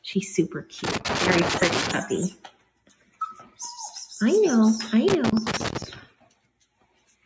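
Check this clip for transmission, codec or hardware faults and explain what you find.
Yes, there are three kinds of fault: a speech noise suppressor left running on non-speech sound, two bursts of loose connector crackle, and three places where that suppressor cuts the sound hard. The call microphone processing passes nothing above 8 kHz, as expected.

Noise suppressor applied to music or sounds runs through the whole clip. The suppressor is tuned for speech. It treats steady tones, ambience and reverb as noise and pulls them down. Onsets get through, but sustained parts and tails sink. The gain swings by roughly 5 dB. The sound pumps and thins out.

Loose connector crackle appears from 0.84 to 1.91 s and again from 5.08 to 5.84 s. A worn or dirty contact keeps making and breaking as it shifts. This chops the signal into fragments. Any DC on the line adds pops. Both stretches sound like irregular scratching laid over the audio.

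Sound cut by the noise suppressor happens three times: 2.31 to 2.69 s, 2.87 to 3.20 s and 6.06 to 6.46 s. Each cut lasts roughly 0.3 to 0.4 s. Here the suppressor judges the sound to be noise and clamps down. The level drops by about 12 dB, 11 dB and 12 dB. Sustained or decaying sound sinks or ends early, and sharp attacks mostly survive.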